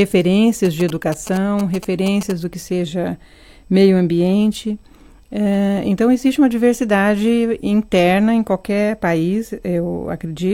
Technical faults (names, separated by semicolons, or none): GSM signalling bursts